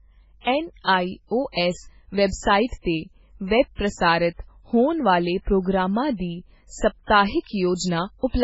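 From the start and through the whole clip, the speech has heavy MP3 compression damage. Nothing remains above 7.7 kHz, and the sound is watery and swirly, with metallic chirping on sibilants and smeared consonant onsets. This is likely a very low bitrate encode, consistent with about 16 kbps, where the encoder cuts the treble and drops weak frequency lines.

From 0.82 to 0.87 s there is pre-echo: a short hiss of about 51 ms arrives just before a sharp attack, which then lands soft and blurred. The codec spread quantisation noise across its transform block, so noise sized for the loud onset leaked into the quiet moment before it.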